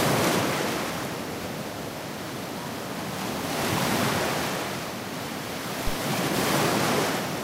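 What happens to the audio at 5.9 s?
At 5.87 s a phantom power thump breaks into the audio. It lasts until 5.98 s. A supply, either phantom power or another source, was switched on or off while the input was live. That sudden voltage step passed through the coupling capacitors into the signal path. It is heard as a deep thump. It peaks at about -16 dBFS and decays over roughly 24 ms.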